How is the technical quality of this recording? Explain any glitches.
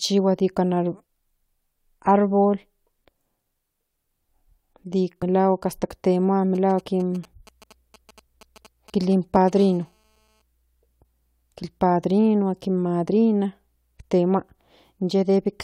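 The recording has clear technical faults: four dropouts where compressed audio frames were skipped, then interference from a nearby 2G phone, first as GSM signalling bursts and then as a steady GSM phone buzz.

Compressed frames skipped occur at 1.03, 5.21, 6.79 and 9.35 s. Whole frames of about 21.3 ms each never reached playback, so the speech jumps forward. At the first two points roughly seven frames vanish, about 150 ms. At the last two only one frame goes, about 20 ms. Because neighbouring frames overlap, each join is a soft, smeared blip rather than the sharp click of a sample-level edit.

GSM signalling bursts run from 6.55 to 9.59 s. A nearby phone exchanging brief control transmissions sends short groups of radio pulses at about 217 Hz, and the audio circuitry rectifies them. They sit about 25 dB below the speech. What separates them from a plain buzz is the galloping dit-dit-dit rhythm of short buzzes.

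GSM phone buzz follows from 9.59 to 10.42 s, about 33 dB below the speech. Once the phone is in a call, it transmits continuously at 217 bursts per second, producing a hard, raspy buzz rich in harmonics. Unlike mains hum, its 217 Hz fundamental has nothing to do with 50 or 60 Hz, and it is gritty rather than smooth.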